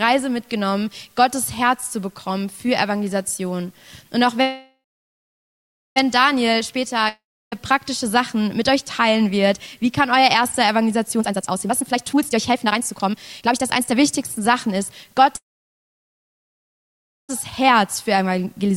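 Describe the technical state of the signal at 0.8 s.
At 0.8 s the signal is intact, with no dropout, distortion or other fault to be heard at that point.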